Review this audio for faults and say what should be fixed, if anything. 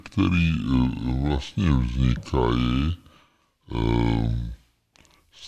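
Wrong sample rate, throughout the clip: the speech plays at about two thirds of its proper speed and sits 7 semitones low, so voices sound deep and sluggish. Speed and pitch drop together by the same ratio, which fits 48 kHz audio played back at 32 kHz without conversion. To prevent it, make sure the playback rate matches the recorded rate, or resample to the device's rate before playback.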